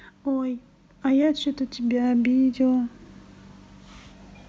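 At 1.02 s the microphone volume stepped up by about 5 dB in a single jump: automatic input control raised the device gain, so speech and background noise get louder together.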